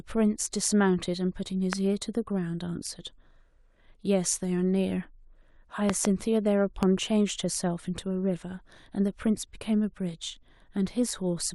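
Sharp loud pops jump out well above the speech at 1.73 s, twice in quick succession from 5.90 to 6.07 s, and again at 6.83 s, with the speech continuing underneath. These are likely sudden voltage pulses, perhaps from a switch or static.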